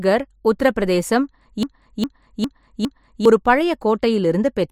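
Speech that stutters mechanically right after "உத்தரப் பிரதேசம்": from 1.63 s to 3.25 s the same 0.41 s fragment plays four times back to back, identical each pass, before normal audio resumes at "ஒரு பழைய". This is a broken-record loop, likely caused by the player, encoder or stream stalling and re-sending the last chunk it held, so whatever should have filled those 1.6 seconds is missing.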